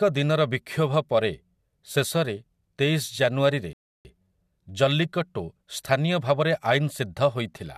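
At 3.73 s the speech cuts to silence until 4.05 s. This is a rebuffering stall. Playback ran dry, then resumed exactly there, adding 318 ms.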